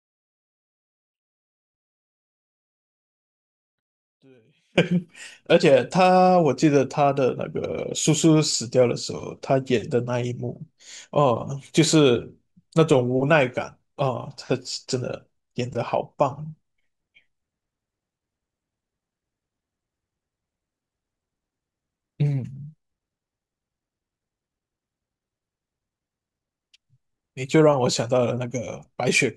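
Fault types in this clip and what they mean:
Audio dropout to a faint residue: The wanted signal was likely lost somewhere upstream while the rest of the chain kept passing whatever reached it, so the speech is replaced by faint residual sound, roughly 30 dB below its normal level. The fault is already under way when the clip begins and lasts until 4.78 s, where full-level speech returns abruptly rather than fading up from a natural pause.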